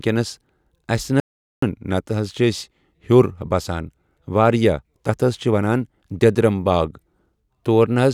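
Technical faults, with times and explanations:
1.20–1.62 s, audio dropout to silence: input likely lost while the recorder kept writing silence; speech cuts to total silence with no room tone, losing 0.42 s.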